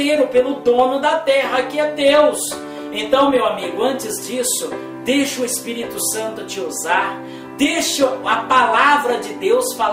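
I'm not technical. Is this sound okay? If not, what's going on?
Yes, the sound is fine: nothing in it points to a technical problem with how it was recorded, processed or delivered.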